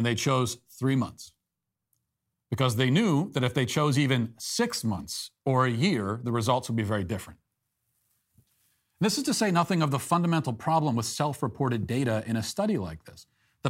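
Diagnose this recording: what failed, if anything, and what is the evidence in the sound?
Nothing in this speech recording points to a failure at any stage of the chain, so there's nothing here to diagnose.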